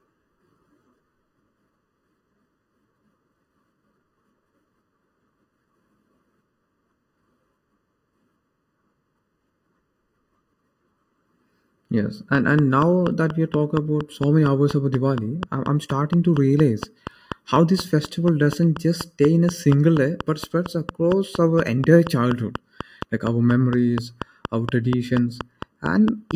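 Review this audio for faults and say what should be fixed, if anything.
Channel delay (comb filtering) runs through the whole speech clip. One channel arrives under a millisecond late, and summing to mono cancels shared content at evenly spaced frequencies, starting around 700 Hz. Unlike a room's reverb, there is no decaying tail, only a fixed hollow, phasey colouring. Time-align both channels, or use a single channel, before any mono fold-down.

A train of clicks starts at 12.35 s and continues until 26.32 s, at 4.23 per second and evenly spaced. Each click peaks roughly 10 dB above the speech. Random codec crackle would be irregular, but these are near-identical and stay audible in pauses, so the likely cause is electrical interference or a faulty connection or power supply. Keep equipment and cables away from noise sources and check connections and the power supply.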